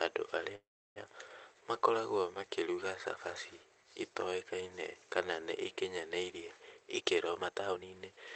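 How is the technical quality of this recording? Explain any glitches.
The recording has two glitches, an early dropout and a hurried stretch at the end. The audio came through a call codec that cuts the spectrum off at about 8 kHz.

From 0.55 to 0.99 s there is a call audio freeze, likely caused by packets stalling in transit until the jitter buffer ran dry. The receiver extended the last sound as a fading buzz or hiss, then about 340 ms of silence. When audio resumes it picks up where it stopped, so nothing is lost, but everything after it runs about 0.41 s late. A waveform shows a smeared, decaying tail and then a flat gap. A spectrogram shows blurred, repetitive bands fading to blank.

From 6.90 to 8.31 s a jitter buffer speed-up plays the sound at about 124% speed. The buffer was holding more audio than its target, so the receiver repeatedly cut out short pitch-period chunks, roughly 0.4 s in total, to reduce latency. 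Pitch stays the same, but the delivery sounds rushed. On a spectrogram the harmonics keep their spacing while syllables and pauses are compressed in time. The waveform looks packed tighter, with small splice points.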